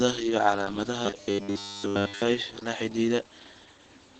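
Throughout the clip the speech carries Opus voice compression in its SILK linear-prediction mode, with nothing above 8.8 kHz. The coarse excitation coding makes it plainly muffled, hoarse and faintly robotic, which points to a low wideband bitrate around 12 kbps.

From 1.06 to 2.22 s, ending just before "la xidhiidha", the speech becomes a rigid metallic buzz at 100 Hz. This is robotic sound from repeated short buffers, likely caused by one short stretch of audio being looped while fresh audio arrives too slowly. The pitch fits a 10 ms buffer, and the whole span is repeated material.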